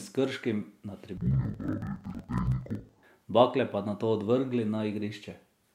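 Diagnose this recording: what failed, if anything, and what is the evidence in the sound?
Between 1.17 and 3.04 s the speech drops an octave and sounds doubled and choppy, with a flutter at about 21.5 Hz, until normal sound returns just before "bakle pa nato". This is interleaved audio read as planar, a fault at the sample-format conversion or buffer stage. Each block of alternating left and right samples was split in half, and each half was treated as one channel. Both halves play at half speed side by side. The roughly 46 ms chop fits a 2048-sample block.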